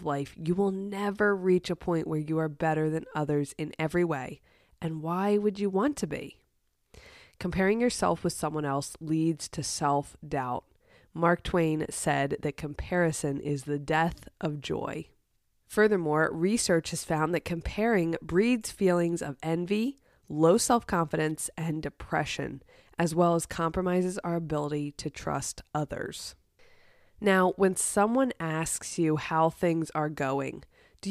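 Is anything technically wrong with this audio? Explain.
No, nothing technically wrong turns up here; the speech just carries on without any glitches or trouble worth pointing out.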